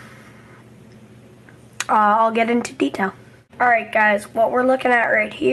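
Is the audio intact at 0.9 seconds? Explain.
No. At 0.9 s the audio is inside a run of repeated timing corrections lasting from 0.42 s to 5.52 s. The receiver keeps repeating short slices, playing at 97 percent speed and adding roughly 150 ms overall. On a waveform this shows as small duplicated segments and seams, and on a spectrogram as brief smeared or repeated columns. The cause is clock drift between sender and receiver throughout the clip. The sender's clock runs about three percent slow, so the jitter buffer keeps draining and forces these uneven stretching edits, heard, if at all, as slight hiccups or an unsteady tempo.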